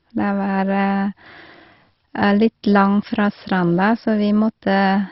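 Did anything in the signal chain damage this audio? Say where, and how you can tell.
Yes, at the codec stage, throughout the speech. Nothing sounds above 5.6 kHz, so it is dull. Upper bands flicker and a gurgling, granular texture rides on everything. This is likely MP2 compression, starving sub-bands of bits, consistent with about 32 kbps.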